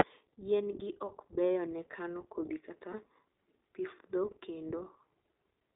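The whole recording passed through the iLBC codec, a narrowband VoIP coder working in 20 ms frames, at a rate that fits its 15.2 kbps mode. It limits the speech to about 300 Hz to 3.7 kHz, leaving it thin, slightly rough and plainly synthetic throughout.

From 2.92 to 2.95 s, lost iLBC frames left a gap the length of one 20 ms frame. The decoder filled it by repeating the last pitch cycle with added noise, heard as a brief buzzy held vowel. Clear speech resumes immediately afterward.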